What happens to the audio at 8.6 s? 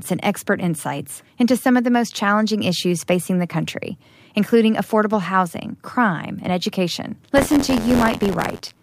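The playback ring buffer has slipped, so the write and read positions cross inside every period. This buffer tearing runs from 7.35 s, just after "housing crime and education", to the end. About a tenth of each buffer replays audio from around 40 ms earlier, with hard joins on both sides. The speech carries a robotic rattle at 86.1 Hz, which fits a 512-sample buffer, and the rattle is present wherever speech sounds.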